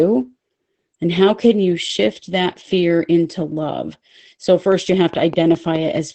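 Across the whole clip, Opus voice compression in its SILK mode leaves the speech muffled and slightly hoarse, with a robotic edge that fits a low bitrate near 12 kbps. A spectrogram shows a flat ceiling with nothing above 8.5 kHz.

From 4.72 to 5.98 s a train of clicks ticks over the speech at a steady 4.8 per second, about seven in all, peaking about 5 dB above the signal. They are likely from electrical interference or a faulty connection, and the waveform shows evenly spaced, similar spikes.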